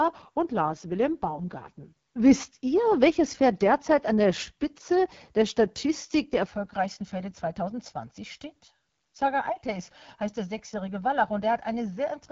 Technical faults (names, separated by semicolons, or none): AMR wideband (HD Voice) codec; channel delay (comb filtering)